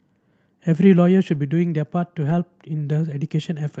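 Speech carried over an Opus call path whose audio tops out around 8 kHz shows two brief patches of lost packet rebuilt from error correction: 1.33 to 1.35 s, which fits a single lost 20 ms packet, and 2.21 to 2.31 s, which fits three separate lost packets. In each, the decoder played low-bitrate copies carried in the following packets, so the sound turns grainier and noisier with no silence. Ordinary loss concealment would instead leave a gap or a buzzy, smeared stretch.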